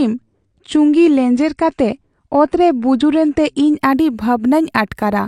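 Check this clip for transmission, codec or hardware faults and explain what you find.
One fault is present: the opening of the clip comes from an adaptive stream starting at a low bitrate. From 0.0 to 3.78 s the player is on a lean rendition while it measures the connection, which fits a 32 kbit/s AAC stream, and then it switches to a richer one, which fits 96 kbit/s. Until the switch the speech sounds dull and swirly, with nothing above 9.8 kHz. A spectrogram shows a flat ceiling at 9.8 kHz that lifts abruptly at 3.78 s, with no gap in the waveform.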